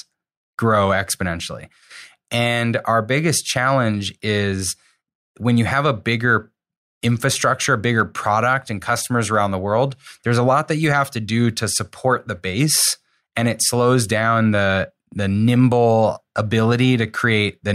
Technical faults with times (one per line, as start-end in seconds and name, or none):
none